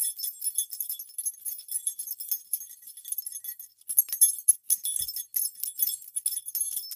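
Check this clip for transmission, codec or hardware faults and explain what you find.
The clip shows one fault, sound cut by the noise suppressor, occurring twice. From 2.74 to 3.05 s the level sags by up to about 6 dB for roughly a third of a second, and from 3.67 to 3.88 s it dips by up to about 7 dB for around 150 ms. The sound sinks in level rather than vanishing. The suppressor mistook this sound for background noise and attenuated it.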